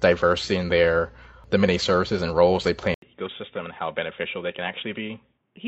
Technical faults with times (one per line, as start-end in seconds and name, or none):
2.94-5.68 input switched to a poorer device